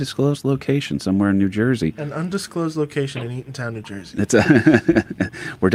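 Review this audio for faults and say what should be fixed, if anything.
Nothing in this audio needs to be fixed, since no faults can be heard.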